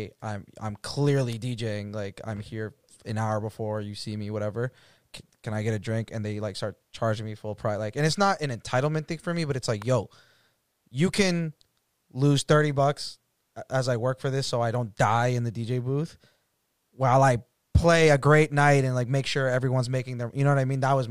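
At 1.32 s, just after "I'm I'm", a sharp snap peaking around -20 dBFS sits on top of the speech, and a fainter one near -25 dBFS follows at 9.82 s after "me but it's like". These are electrical switching spikes, likely arcs from nearby switching picked up by the line.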